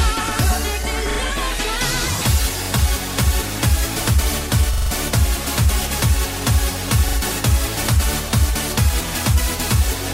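Repeated buffer stutters occur at 1.11, 2.65, 4.74, 7.08 and 9.09 s. Each time, new audio arrived late and the last block, about 43 ms long, was played again, between one and four extra times, with the longest run at 4.74 s. The hard joins give a quick stutter, and nothing is skipped. That block length fits a 2048-sample buffer. A waveform shows identical 43 ms segments butted together, and a spectrogram shows repeated tiles split by thin vertical lines.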